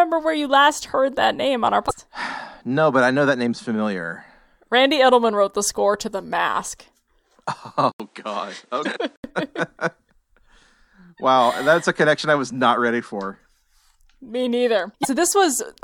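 At 1.87 to 1.91 s, and again at 8.82 to 8.86 s and 15.01 to 15.05 s, brief glitches mark damaged data in a compressed stream: corrupted frames throw the decoder out of sync, and it searches for the next frame header. From 7.92 to 9.24 s the sound turns duller after an 80 ms silence, with nothing above 10.5 kHz, a faint new noise floor well below the signal, and little change in level. This points to the input likely being switched to a poorer device, not a filter, since the background changes too.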